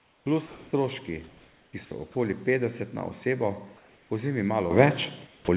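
From 0.00 to 0.26 s the background is replaced by comfort noise, a steady, featureless hiss about 3 dB quieter than the real room noise, which sits roughly 40 dB below the loudest speech. This is likely discontinuous transmission: the sender stopped sending during the pause, and the receiver filled the gap with synthetic noise shaped like the background.

From 0.47 to 0.71 s the voice detector drops sound. About 190 ms of speech gives way to the same flat noise, likely because the sender's detector misjudged the sound as background. Comfort noise returns from 1.28 to 1.73 s, about 2 dB below the real background, likely from the same pause handling. Two shorter drops by the voice detector follow, from 1.85 to 1.91 s and from 2.12 to 2.15 s. The second falls just before "petdeset na osebo". Each briefly replaces speech with noise, likely detector misfires.

After "petdeset na osebo", from 3.77 to 4.10 s, the background is again swapped for comfort noise about 2 dB quieter, likely a transmission pause. 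At 4.71 s the microphone volume steps up by 9 dB, and voice and room noise jump louder together. The last comfort-noise stretch, from 5.27 to 5.48 s, is about 1 dB louder than the surrounding background, likely another transmission pause. Throughout, the call path passes nothing above 4 kHz, which fits a narrowband telephone codec.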